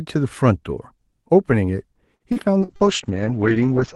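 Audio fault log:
2.15 to 2.83 s, repeated packet loss (robotic sound): four short holes, the longest about 47 ms, follow one another closely. Each is patched by stretching the preceding sound, so about a quarter of the stretch is synthetic fill, giving a choppy texture with pieces missing.
2.60 to 3.95 s, call bitrate drop: the encoder was pushed to far fewer bits, which fits a fall from about 32 to 7 kbps in Opus. The audio turns rough and watery, and the top end narrows from 12 kHz to 8 kHz, muffling it through the end of the clip.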